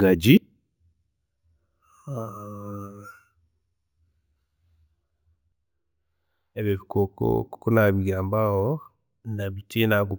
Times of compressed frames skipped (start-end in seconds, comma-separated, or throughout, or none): none